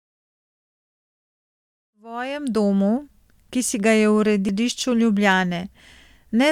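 The laser jumped to a different turn of the disc's spiral at 4.49 s, just after "ki si ga je". This is a CD skip: the player mutes for a very brief moment, heard as a tick, and the speech carries on from another point. The fade-in around 2 to 2.83 s comes before it.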